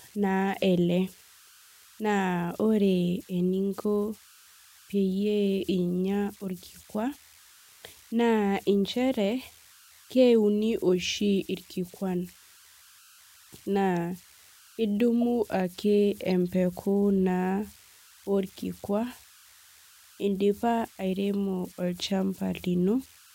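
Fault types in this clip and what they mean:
Converter idle tones: The delta-sigma converter runs without dither, so on quiet input it settles into repeating bit patterns. These patterns form a faint whistle near 1.5 kHz that runs through the whole speech clip. It sits about 29 dB below the signal. It is most exposed in the pauses. Under soft passages it turns into a grainy hiss. Its pitch follows the small offset at the converter input.
Corrupt frame decoded: The decoder played damaged compressed frames instead of discarding or hiding them. Flipped bits made it read wrong gains and codes. Energy then landed at the wrong frequencies for the length of the damaged stretch. This is heard twice, at 15.21 s and 16.25 s. Each is a brief chirp or blip, shorter than 20 ms. The first is clearly louder. The second is a quieter tick. Each likely spans a few consecutive frames.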